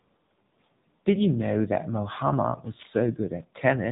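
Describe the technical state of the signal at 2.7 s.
At 2.7 s the speech sounds thin, boxy and audibly buzzy, with a synthetic edge to it and nothing above 3.8 kHz. This is the AMR narrowband mobile codec, present across the whole clip rather than at this moment alone. AMR-NB samples at 8 kHz and rebuilds the voice from a vocal-tract model excited by a few pulses per subframe. The plainly audible roughness fits its 7.95 kbit/s mode.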